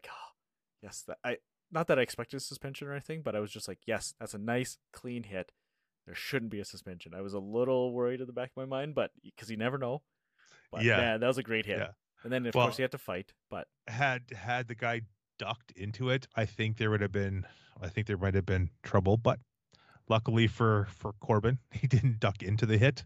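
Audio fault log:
No faults heard anywhere in this speech recording.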